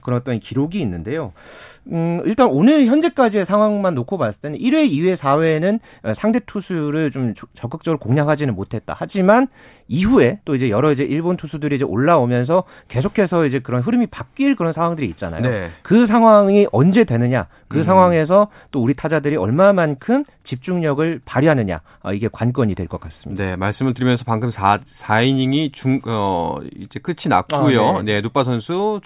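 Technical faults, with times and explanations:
No technical faults detected.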